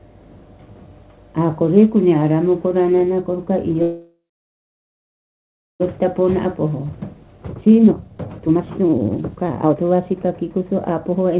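Starting at 3.82 s the sound freezes: the last bit smears into a fading buzz, then goes quiet for roughly 1.6 s before picking up at 5.82 s exactly where it left off. That's a call audio freeze, likely caused by packets stalling en route until the jitter buffer ran dry, so about 2 s of gap got inserted with nothing lost. From 5.97 s to the end you get a jitter buffer speed-up. The receiver is clawing back that built-up delay, about 2 s, by snipping out tiny pitch-period slices over and over, so the audio runs at 136% speed with unchanged pitch and sounds rushed. Underneath it all it's a narrowband call path, cut off above 4 kHz with the usual coding grain, which fits G.711 A-law.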